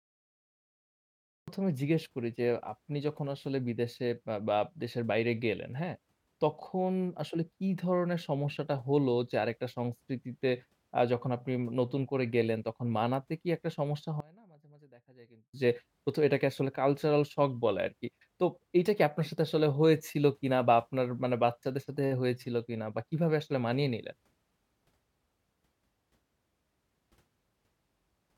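The recording or stream began late: the speech clip opens on digital silence until 1.48 s, where the audio cuts in mid-sound with no natural attack or fade, a cut-off start that drops the listener into an utterance already under way. Later, from 14.20 to 15.54 s, the level collapses by about 25 dB, leaving only a faint residue of the speech. The likely cause is one channel inverted: with one stereo side in reversed polarity, the centred voice cancels when the channels are summed to mono, and only the small difference between them survives.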